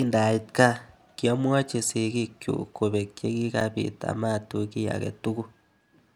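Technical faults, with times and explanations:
3.60 s, block of digital silence: between "kobek che" and "amatuch kiy ake" the speech drops to silence for about 7 ms and then resumes. There is no fade at either edge, so the waveform jumps straight to a flat line and back. At this length it is heard as a tick or dip rather than as silence. On a spectrogram it appears as a thin vertical gap bounded by broadband streaks.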